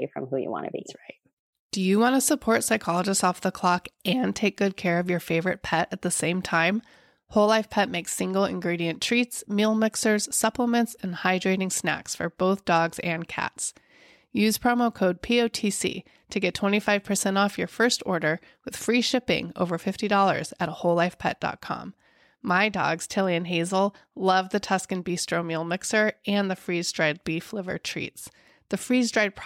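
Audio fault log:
Nothing to log here, as the speech comes across with no audible faults anywhere in the clip.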